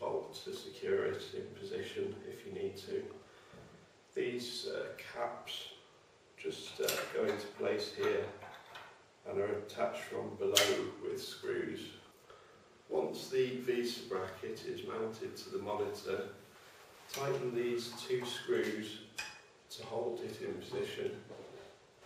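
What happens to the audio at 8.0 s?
Nothing goes wrong at 8.0 s: the audio plays through that moment intact, with no dropout, click, distortion or other fault.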